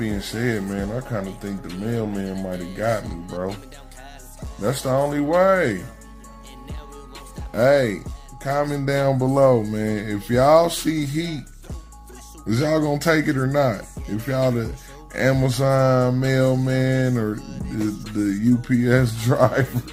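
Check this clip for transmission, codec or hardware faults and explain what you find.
Nothing stood out on listening to the clip.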